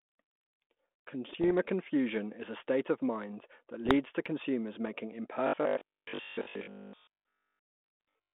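From 1.33 to 1.51 s, just before "confusion is a state", bit errors on an ADPCM link produce a cluster of pops and a rough, gritty burst with a brief change in level. Each flipped bit throws off the decoder's step size and prediction, so the damage rings on for a few milliseconds instead of stopping at a single click. The same pattern returns from 3.86 to 3.96 s, between "state of mind that" and "to consumers making", and again from 8.00 to 8.08 s. The error rate behind these bursts is a small fraction of a percent.

From 5.47 to 8.37 s, after "to consumers making", the speech turns into robotic sound, likely from repeated short buffers. A rigid, metallic 50 Hz buzz sits over the speech, which fits a stretch of about 20 ms being replayed while new audio arrives too slowly. Most of this section is repeated material, so the speech only loosely follows its original contour. This differs from the bit-error bursts because it is a steady pitched drone lasting seconds, not short random crackles. 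The last bit-error burst at 8.00 s falls inside this section.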